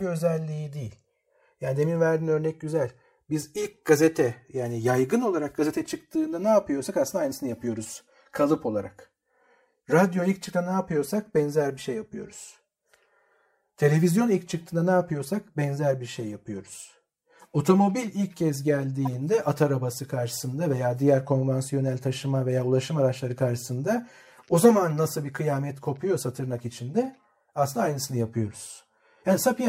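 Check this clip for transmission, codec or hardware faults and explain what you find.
Two faults are audible in this speech clip.

Channels drifting apart runs through the whole clip. The two channels were captured on devices with separate clocks. Their rates differ by a few hundred parts per million. So the delay between them keeps growing, reaching around 10 ms by the end. Summed to mono, the channels form comb-filter notches. These notches sweep slowly through the spectrum as the delay changes. The result is a gradual, slow flanging.

A corrupt frame decoded occurs from 19.05 to 19.07 s, between "ilk kez" and "at arabası karşısında veya". Damaged bits inside a compressed frame were decoded as if valid. Misread gains or codes put energy at the wrong frequencies. The event lasts about 20 ms, which points to a single bad frame. It is heard as a brief blip or chirp, peaking around -20 dBFS.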